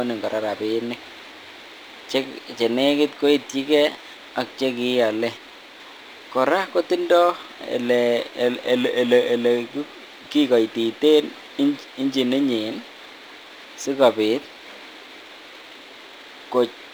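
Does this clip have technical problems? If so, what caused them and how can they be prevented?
Yes. Crude rate conversion runs throughout. A gritty, inharmonic fizz sits around 30 dB below the speech and tracks loud, bright syllables. This fits 48 kHz audio converted to 44.1 kHz by dropping samples. Unlike codec artefacts, it has no warbling or smearing. To prevent it, resample with a proper band-limited, filtered converter.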